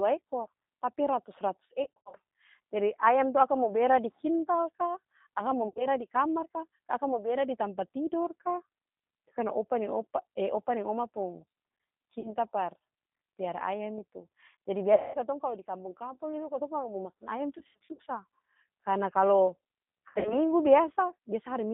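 From the first second the speech runs through the G.729 codec, and the damage is plainly audible. It's an 8 kbit/s vocoder that rebuilds each 10 ms frame from a vocal tract filter, a pitch predictor and a few pulses. The line is held to about 150 Hz to 3.7 kHz, so the sound is thin and boxy, with that slightly rough, synthetic edge rather than real waveform detail.

On top of that there's VoIP packet loss concealed by the speech codec at 1.84, 5.68, 12.20, 14.94, 17.59 and 20.09 s. At each spot the decoder has lost frames, so it keeps extrapolating from its last pitch and filter with the gain dropping, which gives a buzzy, smeared tone that fades. The lost audio runs from 40 ms at 12.20 s up to 200 ms as one stretch at 14.94 s and 260 ms scattered over 400 ms at 17.59 s. Because each frame leans on the previous one, the sound stays weak and warped for a moment after each gap before it recovers.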